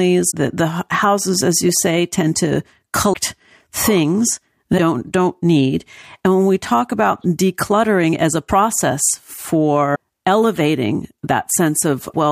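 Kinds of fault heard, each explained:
Broken MP3 bit reservoir: at 0.30, 3.12, 4.77, 8.48 and 9.94 s the speech breaks for 20 to 30 ms, about one 26 ms frame. This is likely lost frames leaving the next frame to decode borrowed bytes from the wrong frame. Unlike a plain dropout, the audio skips ahead.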